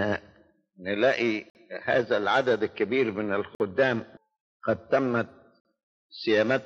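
The audio appears to have been delivered in 2-second chunks, with a gap between chunks at each join, the kind left by codec padding or a player that starts each new chunk slightly late. Nothing is dropped; the sound simply pauses. 50 ms holes of silence appear at 1.5 s, 3.55 s and 5.6 s, recurring evenly every 2.05 s.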